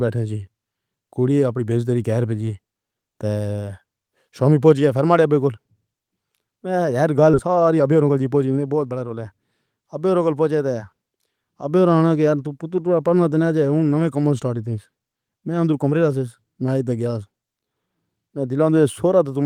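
A speech recording with two timing faults close together. At 7.33 to 7.35 s there is a skip ahead: about a second of audio is simply gone, and playback jumps forward with no fill or silence, so the sound on either side of the cut is butted together almost directly. This is what happens when a backlog of audio is discarded, in transit or by a buffer overflowing, while newer audio is already queued. Right after, from 7.47 to 9.21 s, the jitter buffer speed-up is audible: the receiver, still holding more audio than its target, trims short pitch-period-sized pieces repeatedly. The speech runs at about 112 % of normal rate with unchanged pitch, sounding hurried, and roughly a fifth of a second is removed over that stretch to bring the delay back down.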